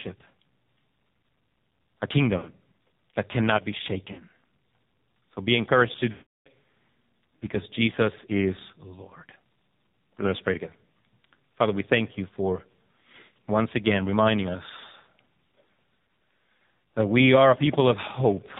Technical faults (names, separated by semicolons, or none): AMR narrowband mobile codec; lost AMR speech frames